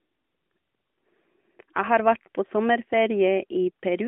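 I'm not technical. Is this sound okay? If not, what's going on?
Yes, nothing stood out as a problem when listening to this speech clip.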